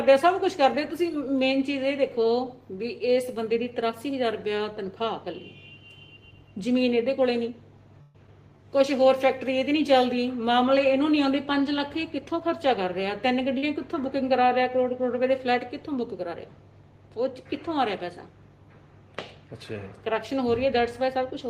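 From 8.01 to 8.17 s there is a call audio freeze, likely from packets held up in transit so the jitter buffer ran dry. The receiver carried the last sound on for 132 ms as a fading buzz or hiss. The audio then resumes where it stopped, with nothing lost and about 132 ms more delay.

At 8.27 to 8.30 s, short concealed packet loss follows. About 20 ms of audio never reached the decoder in time. The receiver bridged the hole by extending the preceding sound, about 9 ms of it, then blended back into the real audio, leaving a brief smear or wobble.

From 12.18 to 13.49 s the jitter buffer speed-up sets in. Too much audio had built up in the buffer, so the receiver kept trimming tiny pitch-period slices, about a tenth of a second in all. Playback runs at 109% with the pitch unchanged and sounds hurried.

At 13.58 to 13.65 s, a short stall from a late packet. A packet missed its slot, the buffer emptied, and the receiver stretched the current sound for 48 ms before continuing from the same point. 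Nothing is lost, but that sound lingers with a faint buzz or dip, and the delay grows by 48 ms.

From 21.01 to 21.48 s, a second jitter buffer speed-up trims about 50 ms, and the audio runs hurried at 111% with the pitch held steady.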